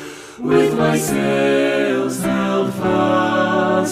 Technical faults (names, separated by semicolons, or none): drift correction step